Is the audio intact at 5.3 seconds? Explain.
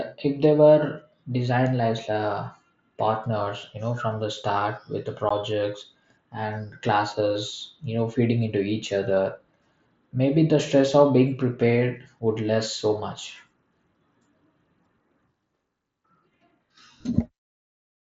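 No. At 5.29 s there is unconcealed Bluetooth headset packet loss: about 15 ms of voice data between headset and phone never arrived, which fits two lost frames, and silence or an idle pattern was played in its place. The result is a brief hole with abrupt edges.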